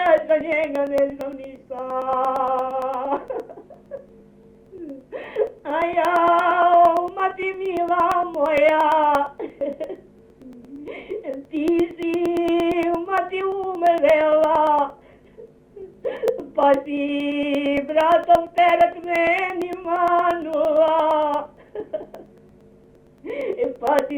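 Periodic USB or driver dropouts, 0.06 to 24.1 s: every 0.115 s a stalled bus or driver skips about 10 ms, leaving regular ticks.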